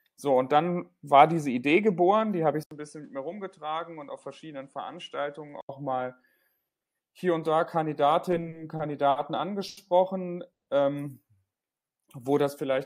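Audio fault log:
2.63–5.69 s, input switched to a poorer device: Right after "geboren die habe ich" the sound drops out for 80 ms. It then returns narrower in band and about 5 dB quieter. A new background noise appears, roughly 40 dB below the signal. The likely cause is the system changing its input mid-recording to another microphone or a headset's call profile. That device has its own band limits, level and noise floor. The original character returns at 5.69 s.
8.31–9.18 s, repeated stalls (stutter): The speech catches five times in this stretch. Together the gaps add 140 ms, about 16 percent of the span, and the longest is 60 ms. Packets kept arriving late, so the jitter buffer ran dry again and again. Each time the receiver extended the last sound until the next packet came. Nothing is lost, but the flow drags and stutters.
9.68–9.79 s, short stall from a late packet: One sound is held too long, by 90 ms. 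A single packet missed its slot and the jitter buffer emptied. The receiver stretched the preceding sound to cover the wait. It then resumed exactly where it stopped. No speech is missing. The playout delay grows by 90 ms from here.
10.53–10.69 s, call audio freeze: The sound stops dead for 140 ms, then carries on from the same point. Nothing is skipped. The gap is inserted and pushes the rest of the audio 140 ms later. The likely cause is packets held up in transit, which left the jitter buffer empty. The receiver's fill faded fully to silence before the packets arrived.
11.82–12.73 s, jitter buffer slow-down: This passage plays at about 91 percent speed with no change in pitch. In total 90 ms is added. The buffer needed to build a reserve, either because it was running low or because it had raised its target delay. To do so, the receiver repeated single pitch periods or slivers of pauses many times in a row. 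The speech sounds drawn out rather than lower.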